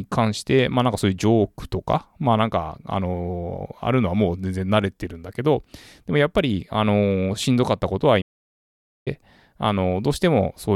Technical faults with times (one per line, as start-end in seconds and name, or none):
8.21-9.08 playback stall